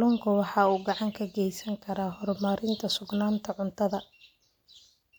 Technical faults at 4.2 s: none

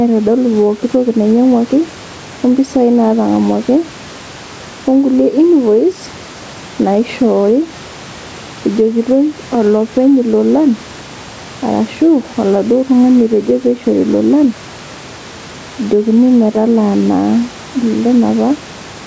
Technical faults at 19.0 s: gain pumping

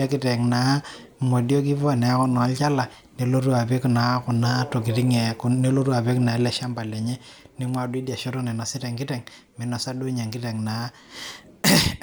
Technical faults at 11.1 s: one channel drops out

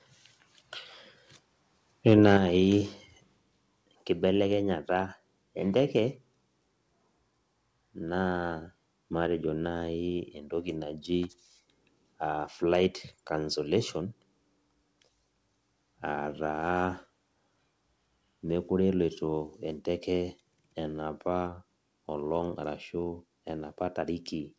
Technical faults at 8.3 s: none

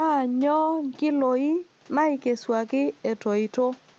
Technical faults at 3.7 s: none

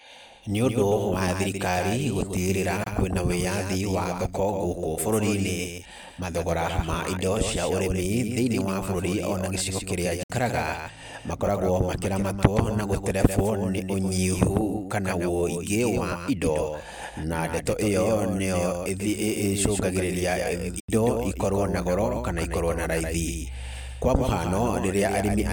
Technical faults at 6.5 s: doubled audio track

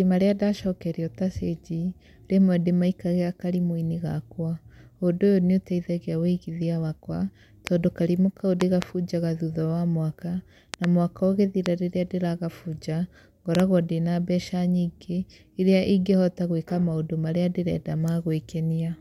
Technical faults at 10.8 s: loud pop

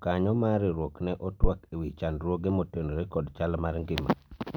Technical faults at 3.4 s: none

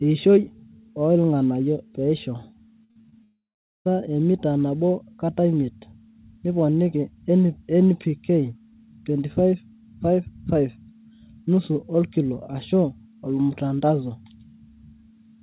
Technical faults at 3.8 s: long network dropout

